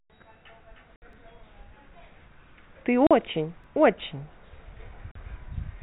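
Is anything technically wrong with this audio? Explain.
Yes. The speech has two faults. Packet loss filled with silence cuts holes at 0.96 to 1.02 s (60 ms) and at 3.07 to 3.11 s and 5.11 to 5.15 s (40 ms each). The lengths fit 20 ms packets that never arrived and were replaced by silence. Each gap has abrupt edges. On a waveform it shows as a flat line, and on a spectrogram as a blank vertical stripe with a thin broadband line at each edge.

Overlapping chunks cause a small stutter at 1.13 s and again at 3.64 s, 2.5 s apart. At each join the new chunk starts about 7 ms before the previous one ended, so that sliver plays twice and a click results. A waveform shows a short repeated segment with a discontinuity at the seam. A spectrogram shows a narrow vertical click line. The G.711 telephone band limit at 4 kHz appears as an empty region above that line.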